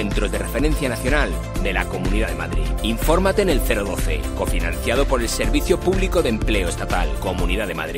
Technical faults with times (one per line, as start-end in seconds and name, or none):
none